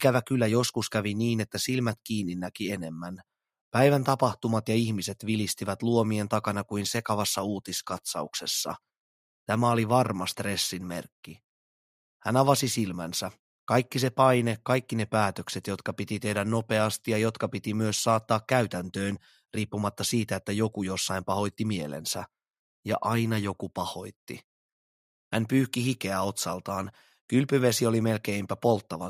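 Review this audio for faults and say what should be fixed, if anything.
Nothing needs fixing, because no technical faults can be heard anywhere in the signal.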